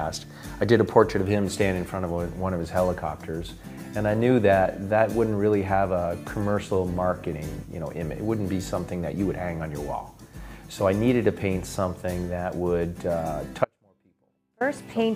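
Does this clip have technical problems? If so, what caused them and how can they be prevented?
Yes. The signal feed was likely interrupted for just under a second while the chain after the break stayed live. This causes an audio dropout to a faint residue from 13.65 to 14.61 s, where the sound cuts abruptly to a faint leak, roughly 35 dB below its normal level, then returns just as suddenly. Securing cables and connectors and monitoring the input for sudden level collapses would prevent it.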